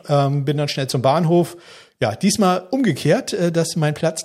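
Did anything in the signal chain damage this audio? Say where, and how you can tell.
No, nothing in the signal chain damaged this audio.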